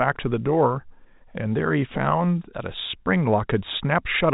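No technical faults are present in this speech recording.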